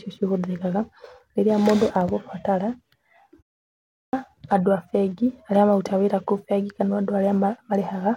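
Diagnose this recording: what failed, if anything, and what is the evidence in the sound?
Clipped start after a pause, at playback: the output device, waking after 0.4 s of silence, swallows 3.74 to 4.13 s, so "andũ a bengi aria" begins abruptly.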